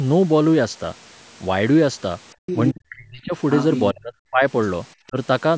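From 2.35 to 2.44 s the room sound is background gated by the echo canceller. While the loudspeaker plays, the microphone is pulled down by about 38 dB for roughly a tenth of a second, so the ambience drops out and returns. On a waveform this is a flat notch, and on a spectrogram a dark vertical gap.

At 2.46 to 2.69 s and again at 3.5 to 3.81 s, the other side's voice leaks through, at roughly 10 dB below the talker. Echo the canceller failed to remove is the likely cause. It shows as a weaker second set of harmonic bands.

Speech is suppressed in double talk from 2.72 to 3.34 s (down about 30 dB), 3.93 to 4.44 s (about 40 dB) and 5.09 to 5.16 s (about 15 dB). With both sides talking, the canceller likely turned everything down, so the voice ducks. The envelope sags, and the spectrogram fades.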